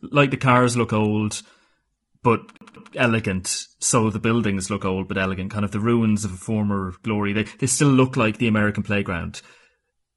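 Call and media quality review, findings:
Speech rough and grainy throughout, plainly audible codec damage; likely low-delay AAC compression (AAC-ELD), at a rate that fits roughly 32 kbps. Short frames smear pitch harmonics. Spectrogram: noise filling gaps between harmonics, thin or synthetic-looking top band.

CD stuck on one turn, 2.57 to 2.94 s: the same 185 ms segment plays twice in a fast, even stutter. Waveform: identical repeated blocks, each separated by a brief mute where the playback jumps back.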